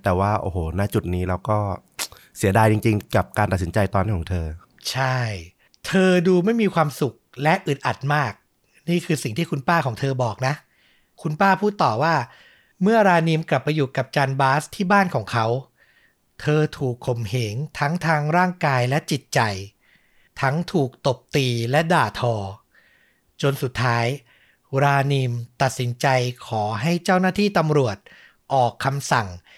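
A speech recording with one fault: at 17.08 s the audio jumps forward, skipping a few milliseconds with no gap of silence, and the two sides are spliced directly. This is likely a dropped buffer (overrun), where samples were overwritten before being read.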